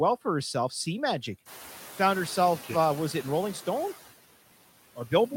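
Noise suppressor artifacts run through the whole speech clip. The suppressor pulls down about 14 dB in each band it judges to be steady noise, working frame by frame, so the background dips in the gaps between words and comes back up under them. After roughly one and a half seconds, the room noise climbs by about 14 dB and settles about 18 dB below the speech.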